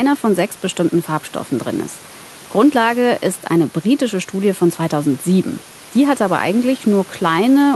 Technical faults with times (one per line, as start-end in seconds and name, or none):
none